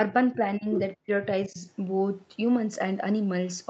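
Speech dips four times in the first two seconds: 0.34 to 0.39 s slightly, 0.58 to 0.66 s by about 15 dB, 0.95 to 1.09 s almost to silence, and 1.47 to 1.63 s by about 15 dB. This is likely speech suppressed in double talk. The echo canceller mistook the talker for loudspeaker echo and turned it down.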